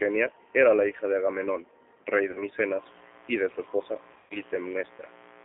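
Speech sent through a G.729A codec at 8 kbit/s is rebuilt from a vocal tract model and a few pulses per frame, with the line passing only about 300 Hz to 3.6 kHz. The result is narrowband and plainly rough and synthetic throughout. VoIP packet loss concealed by the speech codec occurs twice. Around 40 ms goes missing between 2.31 and 2.41 s, which fits two lost 20 ms packets, and about 140 ms is lost in scattered gaps between 4.14 and 4.34 s, with one run of 120 ms. Each time, the decoder stretches the last sound into a fading buzzy tone or coloured noise, and the speech stays weak for a moment after packets return. A 60 Hz mains buzz enters at 2.77 s and lasts to the end, likely from a dimmer, rectifier or poor shielding. Its sharp spikes add a steady, raspy buzz sitting well below the speech.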